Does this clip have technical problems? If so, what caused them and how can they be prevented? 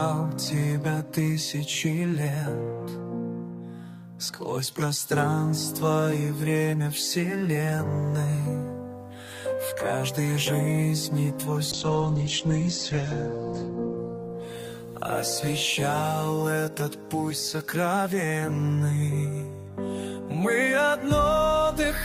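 Yes. A call bitrate drop runs from 11.72 to 17.05 s: the bandwidth estimate fell and the encoder coarsened, with audible bandwidth shrinking from about 20 kHz to 8 kHz and the sound turning muffled and watery. The worst stretch lasts about 2.3 s and points to a rate near 10 kbps. Prevent it by giving call traffic priority on the network and stopping competing uploads.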